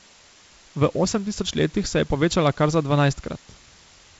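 From start to finish the speech sits on a constant, even hiss: low bit depth with dither. The sound points to roughly 7-bit resolution, with dither spreading the rounding error into steady white noise about 25 dB below the signal, so there is no distortion. The wideband telephone band, cutting off near 7.7 kHz, fits G.722 at 48 kbit/s.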